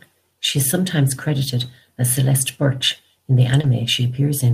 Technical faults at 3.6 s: short concealed packet loss; lost packet rebuilt from error correction

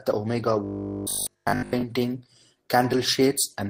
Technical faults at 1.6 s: robotic sound from repeated short buffers

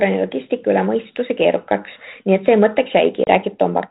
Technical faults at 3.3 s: packet loss on an ADPCM call

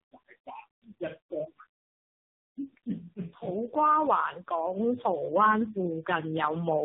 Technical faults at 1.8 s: tandem speech coding

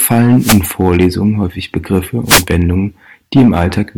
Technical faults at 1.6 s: hard clipping

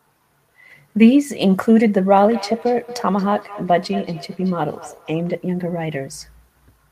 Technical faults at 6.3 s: none

